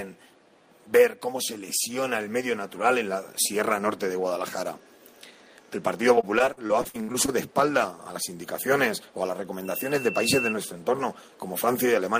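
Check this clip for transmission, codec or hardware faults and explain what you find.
One transmission fault stands out. From 6.15 to 7.30 s the sound turns choppy and robotic. This is repeated packet loss: about a dozen holes, the longest 64 ms, each filled by stretching the preceding sound. The patching covers 27% of that span, producing the choppy, broken texture.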